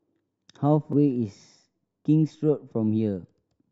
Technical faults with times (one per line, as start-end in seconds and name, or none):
0.93 CD skip